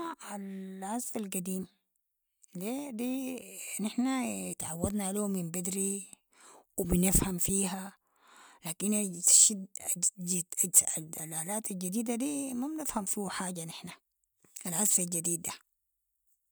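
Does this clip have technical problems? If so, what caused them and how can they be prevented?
No, nothing in this speech recording stood out as a technical problem on listening, so there is nothing here to trace to a cause or to prevent.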